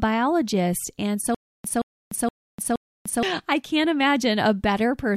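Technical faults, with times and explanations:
1.35–3.23 s, stutter with silent gaps: the player or stream likely stalled, and at each retry it replayed the last fragment it held before running empty again. A 172 ms burst comes back four times at an even 471 ms pace, each time followed by 298 ms of dead digital silence. The audio that belonged in that span never arrives, and normal flow resumes with "I can't".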